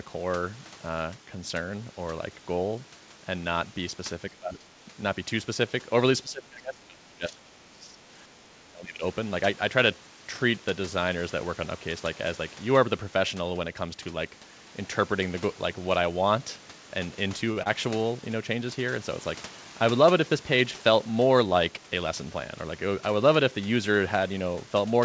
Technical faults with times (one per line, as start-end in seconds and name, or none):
4.31-4.64 speech suppressed in double talk
6.22-8.13 speech suppressed in double talk
8.52-9.03 speech suppressed in double talk
17.52-17.58 short stall from a late packet
17.62-17.67 short concealed packet loss